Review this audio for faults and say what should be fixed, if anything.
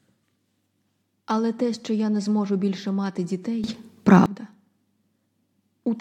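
At 3.64 s, right after "не зможу більше мати", the speech and its background noise jump up together by about 14 dB and stay raised until 4.26 s. This is a sudden gain jump. Because the noise floor steps with the speech, the change sits in the signal chain rather than at the source, most likely a digital gain setting or bit shift applied from one sample to the next with no ramp. Apply every gain change through a short smoothing ramp rather than as an instantaneous step.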